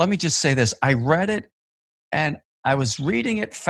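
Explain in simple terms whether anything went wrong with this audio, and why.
One small thing went wrong in this speech. From 2.27 to 2.29 s there is a lost packet rebuilt from error correction. A tiny piece of the audio went missing on its way across the network, most likely a single packet. The next piece carried a cheap backup copy of it. The player used that copy, so there is no silence. Those 20 ms sound rougher and noisier than the speech around them.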